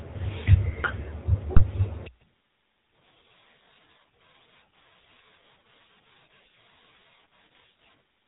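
Throughout, the speech carries the buzzy, gravelly roughness of the GSM full-rate codec, with nothing above 4 kHz, which fits the 13 kbps GSM coder. From 1.56 to 1.63 s, GSM bit errors corrupt the decoder's filter, pitch and gain values, producing a brief squawking, gargled burst across a few frames.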